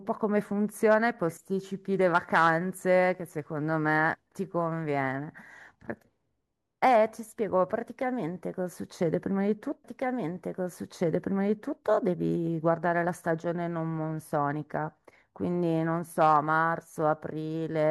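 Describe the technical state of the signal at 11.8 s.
At 11.8 s the clip is in the last moments of a stream segment repeated, running from 9.83 s to 11.84 s. The player fetched or queued the same chunk of the stream twice, so the timeline jumped back and about 2.0 s of speech plays a second time. That duplicated stretch ends just after 11.8 s. A listener hears the passage restart with a small blip at the jump back, and everything afterwards arrives roughly two seconds later than it should.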